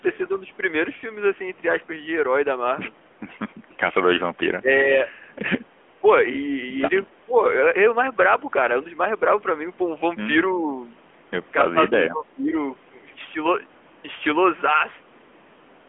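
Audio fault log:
throughout: AMR narrowband mobile codec. The speech is confined to roughly 200 Hz to 3.4 kHz and has a plainly buzzy, synthetic quality from the low-bitrate vocal-tract model. The degree of coarseness fits a mid-rate mode near 10 kbps.
4.6–4.9 s and 11.7–12.53 s: speech suppressed in double talk. The talker's level dips by up to about 15 dB, briefly in the first span and for about half a second in the second. This is likely an echo canceller turning down its own talker while the far side spoke.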